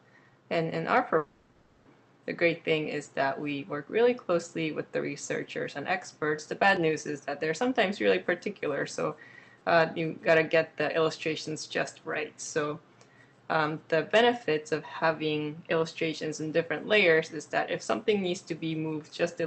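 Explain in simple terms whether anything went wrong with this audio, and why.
Something did go wrong, between about 1.17 and 1.87 seconds. For roughly 0.7 seconds the real sound disappears and is replaced by a smeared, buzzy stretch that fades, before normal audio resumes with that part missing. This is a long network dropout, likely caused by the connection delivering no audio for that time. A brief glitch would be only a click or blip. Here the gap is long enough that the receiver had to fill it with an invented imitation of the last sound.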